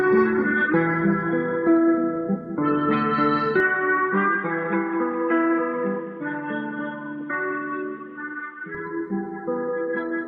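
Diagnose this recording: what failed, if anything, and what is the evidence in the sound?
From 3.60 s to 8.75 s the sound abruptly turns dull and boxy, with nothing above 3.8 kHz, a slightly lower level and a fresh background noise floor roughly 40 dB down. It snaps back at 8.75 s, and neither switch leaves any gap. At the capture stage this is likely an input switched to a poorer device, one with a narrower band and its own tone and noise. A spectrogram would show a flat ceiling at 3.8 kHz for that stretch, and the waveform a modest drop in amplitude.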